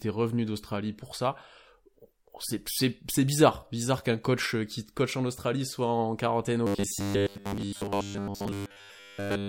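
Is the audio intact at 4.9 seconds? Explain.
Yes, the audio is intact at 4.9 seconds, with the speech running through that moment without any break, dropout or other technical fault.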